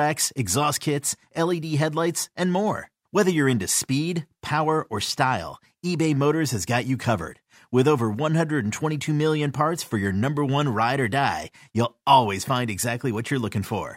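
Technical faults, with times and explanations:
No technical faults found in the speech recording.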